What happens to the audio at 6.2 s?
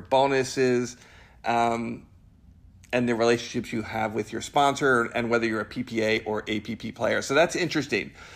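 At 6.18 s, just after "whether you're a", the software likely failed to collect a buffer before the hardware overwrote it. This is a dropped buffer (overrun). A few milliseconds of audio vanish and the two sides butt together, giving a small skip.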